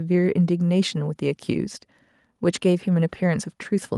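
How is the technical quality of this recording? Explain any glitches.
No glitches can be heard anywhere in the recording, and the signal stays technically intact throughout.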